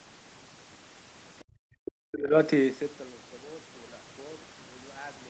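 Speech runs through a call chain whose echo canceller slips around the 1.4 to 2.4 second mark, within audio band-limited to 8 kHz as an Opus call at about 20 kbps would be. Residual far-end signal, likely the other side's voice leaking through, appears as a very faint scrap from 1.39 to 1.44 s, then a clearer one, about 20 dB under the talker, from 1.85 to 1.92 s. Between them, the background is gated by the echo canceller: the room tone drops by about 40 dB from 1.44 to 1.68 s before recovering. From 1.96 to 2.35 s the talker's own level falls sharply, by roughly 40 dB, most likely speech suppressed in double talk as the canceller mistook it for echo.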